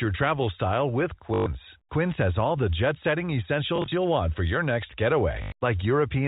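Speech over a G.711 telephone path, audible as nothing above 4 kHz, breaks up three times from packet loss with the last packet repeated: 1.34–1.46 s, 3.76–3.92 s after "all the jet setting" (brief scattered repeats), and 5.42–5.52 s after "want for your next". A buzz near 50 Hz points to 20 ms packets. A plain dropout would leave silence instead.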